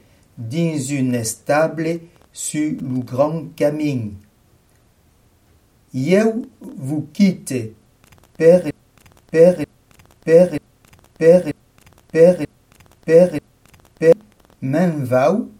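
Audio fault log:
8.71–14.13 s, broken-record loop: a fragment about 0.94 s long plays six times in a row, identical each time and joined with no gap, so the sound keeps snapping back to the same point instead of moving on. This is likely a stall in the player, encoder or stream, which kept resending the last piece it held in its buffer. Whatever should have been heard during those seconds never arrives and is missing from the clip.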